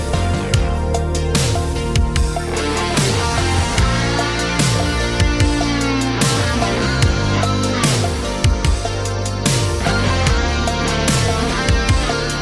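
No technical faults are audible.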